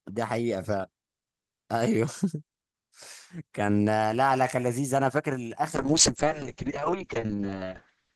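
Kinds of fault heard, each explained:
Call bitrate drop: from 5.76 s the encoder falls from 32 to 6 kbps, speech goes coarse and muffled, top end capped near 8 kHz through the end.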